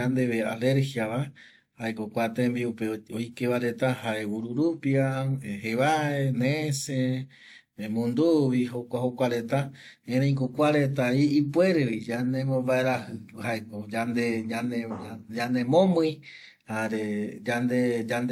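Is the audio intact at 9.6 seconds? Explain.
No, at 9.6 seconds the speech carries stacked compression artefacts, likely from transcoding between lossy codecs, with smeared, swirly highs and a low cut-off. A spectrogram would show a hard upper ceiling and blotchy high bands, which fits an HE-AAC pass on earlier WMA audio.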